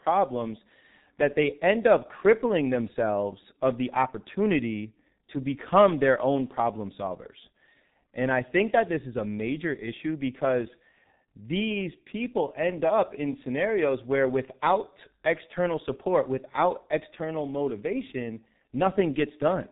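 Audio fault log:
throughout G.723.1 codec: heavy coding at what sounds like about 6 kbit/s cuts everything above 3.8 kHz, making speech muffled and hoarse with smeared consonants.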